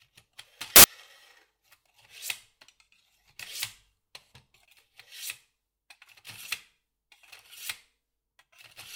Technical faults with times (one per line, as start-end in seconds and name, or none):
0.76-0.84 samples built from the wrong bytes